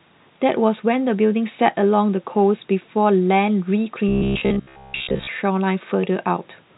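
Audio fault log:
4.09–5.28 s: robotic sound from repeated short buffers. For just over a second the speech turns into a rigid, metallic buzz at 66.7 Hz, likely because audio arrived too seldom and playback kept looping 15 ms chunks in place of most of the real signal.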